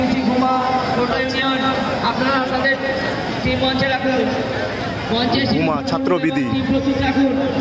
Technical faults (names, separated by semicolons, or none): gain pumping